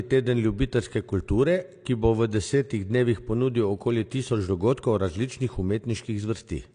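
From the first second to the end, the speech carries AAC compression artefacts, likely from a low-bitrate AAC-LC encode, with damage you can plainly hear. Nothing survives above about 9.8 kHz, so the top end sounds dull and closed in, which fits something around 32 kbps. The encoder has thinned out the spectrum to save bits, and that shows up as a smeared, warbling texture on held vowels and a fizzy edge on the sibilants.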